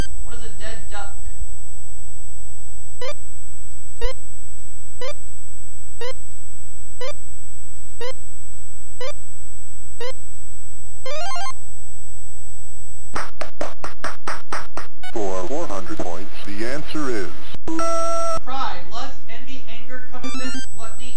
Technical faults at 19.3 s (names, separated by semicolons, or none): none